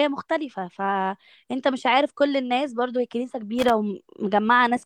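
At 3.59 s the speech is interrupted by loose connector crackle lasting about 0.11 s, to 3.70 s. A worn or dirty contact in the signal path is making and breaking as it shifts, so the audio is chopped on and off in rapid, irregular succession, heard as a short scratchy burst. On the waveform this shows as ragged dropouts and sharp spikes; a spectrogram shows scattered vertical broadband streaks across that span.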